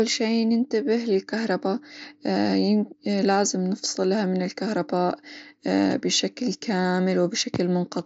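Concealed Bluetooth headset packet loss shows up at 3.85 s, a tiny 7.5 ms gap the phone patched with recent waveform, barely audible. At 6.82 to 6.84 s a longer 22.5 ms run repeats a stretch, giving a brief buzzy hold and slight warble over the mSBC wideband sound.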